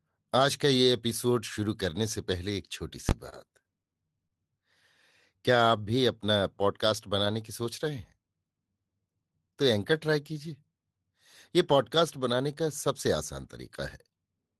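At 3.09 to 3.11 s, invalid numbers at full scale: a calculation went to infinite or invalid values, pinning a 20 ms block at maximum amplitude. It is heard as a single hard bang. The waveform shows a flat slab held at one extreme, and the spectrogram a bright broadband vertical stripe.

From 3.29 to 4.33 s come repeated stalls (stutter). Packets arrived late, so the jitter buffer ran dry seven times, and about 135 ms was filled by extending the preceding sound, the longest gap 38 ms. Nothing is lost, but the speech drags and hiccups. Spectrograms show smeared, repeated frame patterns.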